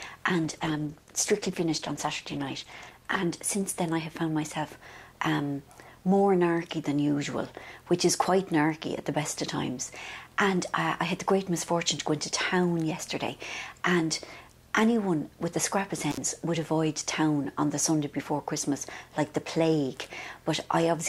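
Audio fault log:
0.45–5.23 s, call bitrate drop. The encoder's rate falls from 96 kbps to 13 kbps, bottoming out for about 2.2 s. Coarser coding makes the sound rough and watery. High frequencies are trimmed away, so it turns muffled until the rate climbs back.
16.11–16.18 s, intermittent contact. A loose connection opens for about 60 ms. The sound cuts out abruptly, with crackle at both edges. Faint hiss remains while the contact is broken, then the signal snaps back.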